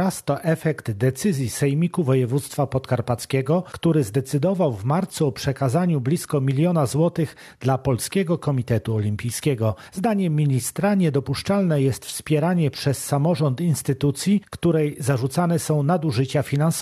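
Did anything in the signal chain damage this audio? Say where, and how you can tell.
No, nothing in the chain audibly damaged this audio.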